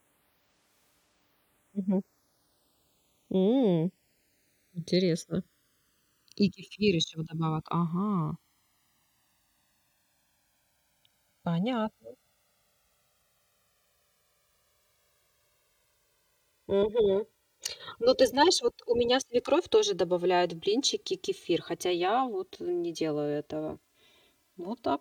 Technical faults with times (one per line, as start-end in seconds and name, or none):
0.00-25.01 channels drifting apart